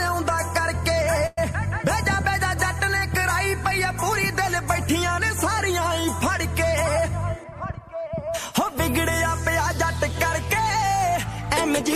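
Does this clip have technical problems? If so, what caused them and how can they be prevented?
Yes, two. From 1.26 to 1.38 s there is a call audio freeze. The last sound is stretched into a fading buzz or hiss for about 109 ms, and the audio then resumes where it stopped, so nothing is lost but the delay grows by 109 ms. The likely cause is delayed packets draining the jitter buffer. On a spectrogram this shows as smeared horizontal bands with no onsets; the waveform shows a decaying repeated pattern. A larger adaptive jitter buffer or a steadier network path would prevent it.

From 6.83 to 8.09 s a jitter buffer speed-up plays the audio at about 107% speed with unchanged pitch. The receiver trimmed pitch-period-sized slices, roughly a tenth of a second in total, to shed the excess delay built up earlier, and the result sounds slightly hurried. On a spectrogram, events sit closer together while harmonic spacing stays the same; the waveform shows periodic cycles quietly missing. 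Gentler, slower buffer adaptation would prevent it.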